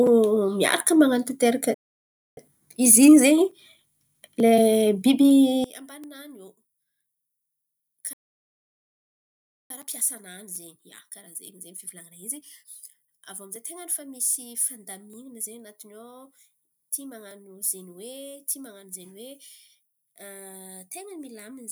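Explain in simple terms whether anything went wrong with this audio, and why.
Several things go wrong in this speech clip.

First, there are two playback stalls. The speech cuts out at 1.74 s and stays silent until 2.37 s, a gap of about 0.63 s. It happens again from 8.13 s to 9.70 s, which is a longer gap of about 1.57 s. Each time, the player was likely starved of data or held up, so it had nothing to play until it recovered.

Right after each stall there is a time-compressed catch-up. From 2.37 s to 5.37 s the speech runs 1.1 times faster than normal. From 9.70 s to 12.70 s it runs 1.15 times faster. The pitch stays normal, so voices don't sound squeaky. Instead, the player trims tiny slices out of the audio and blends the gaps to work off its backlog. That makes the speech sound rushed.

From 5.64 s to the end, the sound drops sharply in level. The centred voice and background almost disappear. 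This is one channel inverted. One side of the stereo signal is likely flipped upside down. When the two sides are combined, they mostly cancel out. Only the small differences between the left and right channels remain.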